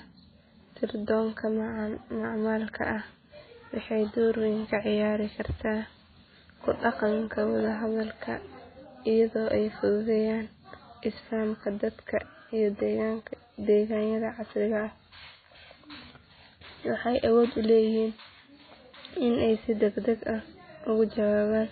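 Throughout, heavy MP3 compression at a very low bitrate has likely starved the encoder, removing everything above 4.5 kHz and leaving the speech dull, watery and swirling.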